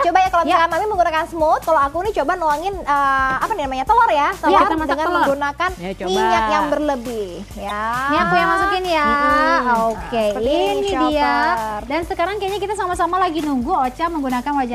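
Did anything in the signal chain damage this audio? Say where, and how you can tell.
Yes. Damaged data in the compressed stream produces brief glitches at 1.61–1.65 s and 7.67–7.71 s, each about 40 ms. The decoder misreads corrupted frames and resyncs.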